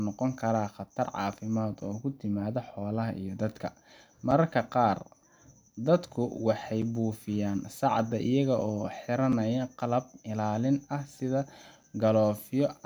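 Short, hard-edged dropouts of about 6.5 ms break the speech at 1.81, 4.31, 6.82, 9.32 and 11.83 s, evenly spaced 2.5 s apart. This is a gap between chunks: the audio was delivered in 2.5 s blocks, and silence was inserted at each join.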